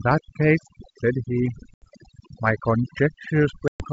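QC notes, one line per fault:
throughout: overdone noise removal. The background sinks to near silence dotted with twinkling specks, because noise reduction set far too strong keeps switching off individual frequency bands near its noise estimate, taking the speech's quieter components with them.
1.74–1.88 s and 3.68–3.85 s: packet loss on an ADPCM call. Each gap is a hard-edged hole of about 80 ms and then 120 ms, suggesting a few and then several lost packets. Speech returns with brief distortion while the G.722 decoder's predictor and step size resynchronise.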